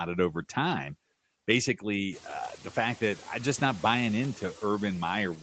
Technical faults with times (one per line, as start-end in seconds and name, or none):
0.00-5.42 noise suppressor artifacts